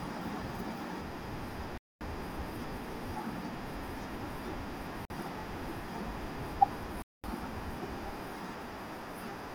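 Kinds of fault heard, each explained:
Bluetooth stall: at 1.78, 5.05 and 7.02 s speech cuts to silence for 0.23, 0.05 and 0.22 s, likely a buffer emptied awaiting resent packets.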